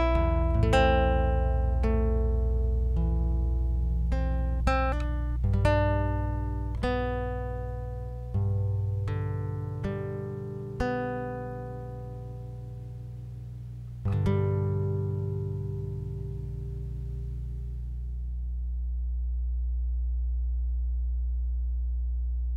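From start to finish the audio carries mains hum, a steady low tone at 60 Hz with some low harmonics above it, sitting at roughly the same level as the wanted sound. Power-line current is leaking into the signal path through a ground loop or a nearby transformer. On a spectrogram it shows as an unbroken horizontal line at 60 Hz with further lines stacked above. The waveform never settles to silence, riding on a constant low-frequency wave instead.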